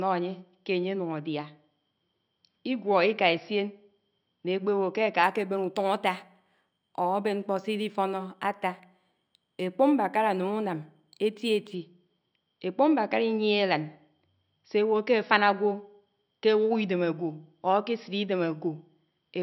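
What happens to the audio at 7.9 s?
At 7.9 s you're inside a stretch of imaging from linear upsampling, 5.24 to 11.75 s. What sounds like a 12 kHz source was stretched by straight-line interpolation, leaving dull highs and faint 6–12 kHz mirror images, roughly 35 dB down, as a thin metallic shimmer on sibilants.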